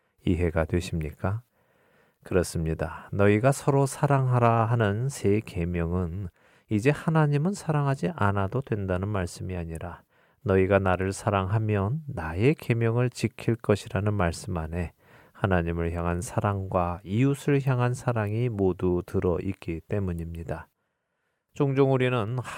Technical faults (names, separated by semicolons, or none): none